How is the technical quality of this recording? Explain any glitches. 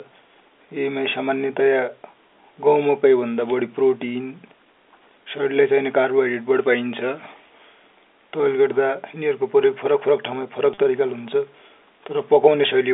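One brief glitch stands out in this narrow telephone-band speech, which is limited to roughly 300 Hz to 3.6 kHz, consistent with G.711 coding.

At 10.74 to 10.78 s, the speech briefly freezes into a slightly held, buzzy tone. This is packet loss with pitch repetition. About 40 ms of audio never arrived, which fits two 20 ms packets. To fill the gap, the receiver looped the last complete pitch cycle it had. That repeated cycle gives the short, droning hold.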